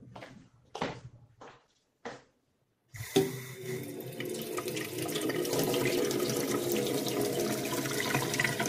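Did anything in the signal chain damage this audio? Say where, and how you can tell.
Yes. A call bitrate drop hit the codec stage from 0.38 to 2.84 s: the encoder's rate fell from 64 to 13 kbps and held near the bottom for 2.4 s. Coarser coding and a trimmed top end make the sound rough and muffled until it recovers.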